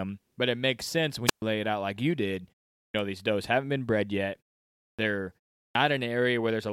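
A speech recording in which a burst of hiss falls into near silence from 1.26 to 1.42 s, a hole of about 126 ms before the voice returns: a wireless microphone squelch dropout, where the fading radio signal trips the receiver's mute. Three times, after pauses of 0.42, 0.57 and 0.36 s, speech starts abruptly without its opening sounds at 2.87, 4.91 and 5.67 s, losing 72, 76 and 81 ms. This is a clipped start after a pause, caused by the output device sleeping through the silence and waking too late.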